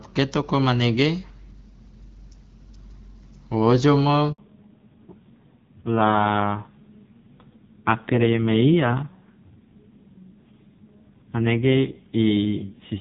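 At 4.32 s, right after "wo ojomo", a handover gap cuts the speech for about 60 ms, until 4.38 s. While the call switched networks no speech frames arrived, so the voice dies away and that stretch of speech is lost.

From 4.38 s to the end, the call shows a fallback to narrowband. Before this point the speech carries HD Voice clarity with only light AMR wideband coding texture. Afterwards nothing remains above 4 kHz, and the speech turns muffled and rough, which fits a low-rate AMR-NB mode around 5.9 kbit/s.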